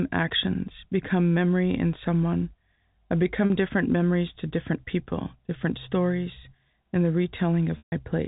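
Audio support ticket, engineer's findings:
Packet loss with pitch repetition: receiver concealing dropped packets by repeating the last pitch period. At 3.47–3.50 s, after "memory in someone I" and before "different memories to different", about 40 ms lost, consistent with two packets, heard as a brief held buzz. At 7.78–7.92 s, about 140 ms lost, consistent with seven packets: the repeat fades to silence, then a cross-fade back into speech. G.711 mu-law path at 64 kbps, narrowband telephone sound, no audible codec fault.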